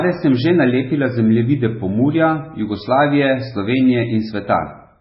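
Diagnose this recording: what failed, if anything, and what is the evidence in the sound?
The failure is at the codec stage: the speech carries MP3 compression damage from start to finish, with nothing at all above 5.6 kHz, the treble cut off at a fixed frequency, and a watery, swirling quality over the whole clip. That heavy damage is likely the result of the encoder running very short of bits, consistent with a bitrate near 16 kbps, and zeroing weak frequency lines that flicker on and off between frames. On a spectrogram this shows as a flat ceiling at 5.6 kHz above patchy, speckled energy.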